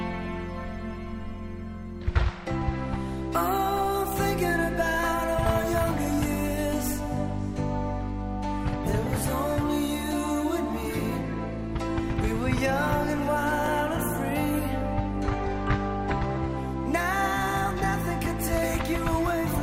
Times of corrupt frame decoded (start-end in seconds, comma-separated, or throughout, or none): none